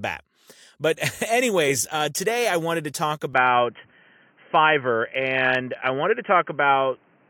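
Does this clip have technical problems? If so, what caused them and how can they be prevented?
Yes. From 3.34 s to the end, just after "I wanted to talk", the speech abruptly turns dull and boxy, with nothing above 3.2 kHz, a level shift of roughly 5 dB, and a faint new background hiss well below the speech, all with no gap at the change. The likely cause is an input switched to a poorer device, such as a headset dropping into its narrowband call profile. Locking the recording input to one device and disabling automatic switching prevents this.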